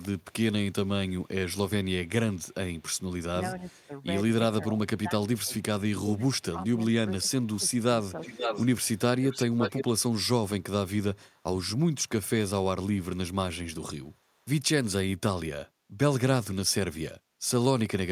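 From 0.0 to 2.83 s a very faint copy of the speech trails the original by 410 ms. This is echo leak, likely a far-end loudspeaker being picked up by the microphone and not fully cancelled, so it was sent back. A short scrap returns at 3.77 s with the same 410 ms lag. Unlike reverberation, the copy is a distinct repeat at a fixed delay, not a smooth tail.

Between 3.58 and 8.37 s the talker's own speech sinks in pieces, about a second in all, dropping by up to about 15 dB. This is speech suppressed in double talk, likely an echo canceller turning everything down while both sides spoke at once. What sets it apart from echo is that sound goes missing instead of being added.

From 7.43 to 9.84 s the echo leak returns much stronger, only about 5 dB below the speech, now 518 ms behind. The delay change marks this as a separate leak from the earlier one.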